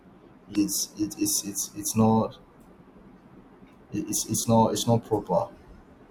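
At 0.52 to 0.56 s, damaged data in the compressed stream makes the decoder lose frame sync and hunt for the next header, producing a brief glitch.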